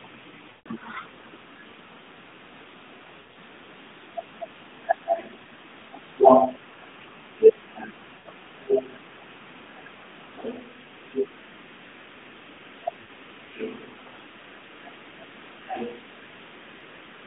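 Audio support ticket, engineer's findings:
Drawn-out, smeared speech fading toward silence, then weak, rough recovery, at 0.50–0.68 s (about 160 ms), 3.20–3.38 s (scattered, longest gap about 60 ms), 8.18–8.28 s and 13.02–13.08 s. Lost AMR speech frames: the decoder repeats the last good pitch and vocal-tract settings at falling gain. The roughly 160 ms gap fits a run of eight 20 ms frames. The AMR narrowband mobile codec path itself is audible as a 150 Hz–3.6 kHz band with light coding colour, consistent with 12.2 kbps.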